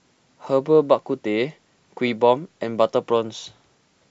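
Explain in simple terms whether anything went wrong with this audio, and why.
Nothing went wrong here; the speech comes through with no glitches, dropouts or odd noises anywhere along the way.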